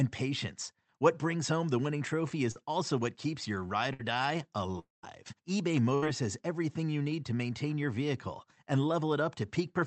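A speech recording carried over a call path whose Opus-style coding limits the top end to around 8 kHz, consistent with a modest bitrate near 32 kbps, is interrupted four times by network losses. At 2.51 to 2.57 s there is short concealed packet loss. About 40 ms of audio never arrived, and the decoder bridged it by extending the preceding sound, so only a brief smear or wobble marks the spot. What separates it from the longer events is its length: far too short for any fading to be heard, and the speech carries straight on. Two bursts of packet loss follow, at 3.93 to 4.01 s, about 60 ms missing, and at 5.95 to 6.04 s, about 80 ms missing. In each, packets were lost or arrived too late to be played, and the receiver stretched the last sound into a held buzz or hiss that weakens across the gap before real audio resumes. Unlike the short loss, the fade is audible, but sound never gives way to silence. 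Between them, at 4.79 to 5.05 s, sits a long network dropout: roughly 240 ms is missing, most likely because nothing reached the receiver for that stretch. The concealed tail fades out and leaves about 150 ms of near silence before the speech returns further along. That stretch of silence is what sets it apart from the bursts.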